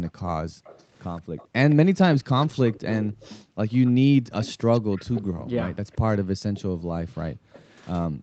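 Echo leak runs from 0.05 to 7.87 s: a faint copy of the speech trails it by about 170 ms, likely from a loudspeaker's echo canceller failing to remove everything its microphone caught. Background gated by the echo canceller appears at 0.14 to 1.37 s, 3.44 to 4.32 s, and from 5.24 s to the end, where the canceller clamps the microphone and the room sound drops by up to about 40 dB before returning.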